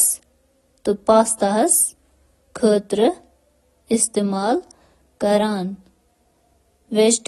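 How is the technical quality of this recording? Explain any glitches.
Technical quality is audibly reduced from start to finish. The likely cause is AAC compression at a low bitrate, consistent with around 32 kbps. The encoder removes everything above 12 kHz and coarsely quantises the rest, leaving the speech plainly dull and smeared throughout.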